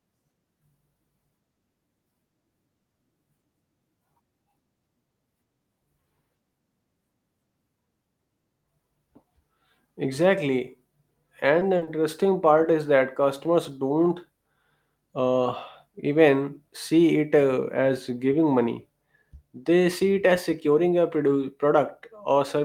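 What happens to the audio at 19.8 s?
Nothing goes wrong at 19.8 s; the speech carries on intact through that moment, with no dropout, click or distortion.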